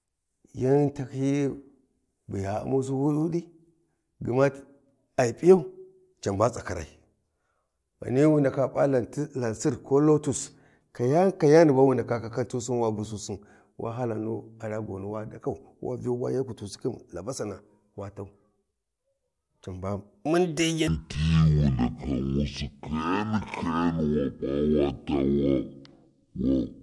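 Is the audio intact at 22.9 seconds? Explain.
No. From 20.88 s to the end at 26.83 s, speech drags at half speed an octave low: a wrong sample rate, 48 kHz material played at 24 kHz.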